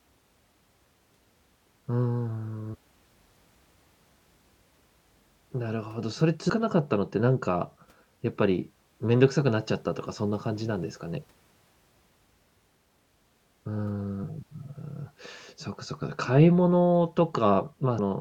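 In this speech, compressed frames are skipped four times, at 2.73 to 2.75 s, 6.49 s, 14.23 s and 17.99 s. At each point the decoder plays no audio for a run of whole frames, either because the frames were missing or because it rejected them as corrupt. Playback jumps forward by roughly 0.4 s at the first point and by about 0.15 to 0.2 s at the other three. At each join the speech is heard to jump ahead.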